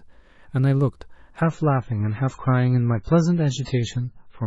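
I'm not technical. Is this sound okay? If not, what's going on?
No. From 1.41 s to the end, the speech suddenly turns dull and fuzzy. That's an adaptive stream at a lower bitrate: the connection likely slowed, so a cheaper version played.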